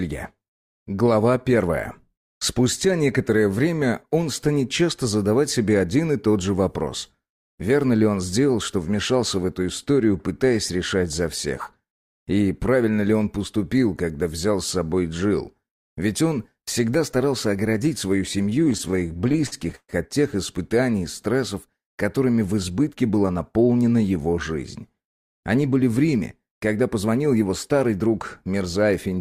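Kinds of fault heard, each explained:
Repeated stalls (stutter): From 18.49 to 19.91 s the sound drags and hiccups, with 23 brief holds totalling about 411 ms, the longest 131 ms. Packets arrived late, so the jitter buffer kept running dry and the receiver stretched the last sound, fading it in longer waits.
Jitter buffer speed-up: Between 22.70 and 23.53 s the audio runs hurried, about 110% speed with pitch unchanged. The buffer had filled beyond its target, so the receiver trimmed short pitch-period pieces repeatedly, removing roughly a tenth of a second to reduce delay.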